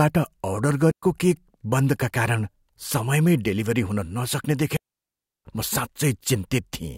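A digital wireless dropout occurs twice: the link loses too much data and the receiver mutes quickly. The speech falls into clean near-silence from 0.91 to 1.03 s, about 115 ms, then again from 4.77 to 5.45 s, about 690 ms, with no noise burst either side.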